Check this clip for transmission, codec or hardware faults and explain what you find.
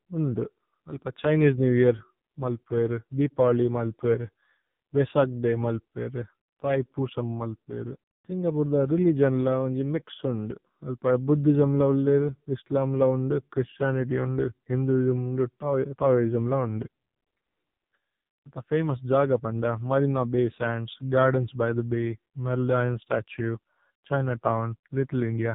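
The speech has been through an AMR narrowband mobile codec for its whole length, and the coding damage is heavy. AMR-NB works at 8 kHz sampling, and this clip has nothing above 3.8 kHz, so sibilants and consonant detail are gone. It models the vocal tract and drives that model with a few pulses in each 5 ms subframe. At 5.9 kbps those pulses are sparse, which makes the voice buzzy and synthetic.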